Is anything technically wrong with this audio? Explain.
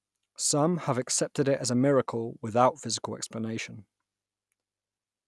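No, nothing technically wrong can be heard in this speech recording. No faults turn up anywhere in it.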